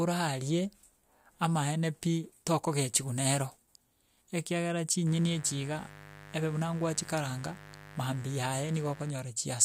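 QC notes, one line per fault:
5.07–9.11 s, mains buzz: a steady, raspy buzz sits under the speech, roughly 20 dB below it. Sharp switching spikes from a dimmer, rectifier or poor shielding arrive twice per 50 Hz cycle, spreading harmonics up into the kilohertz range.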